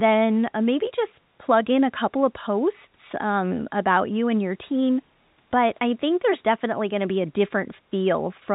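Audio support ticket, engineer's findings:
No faults found; call audio band-limited at 4 kHz.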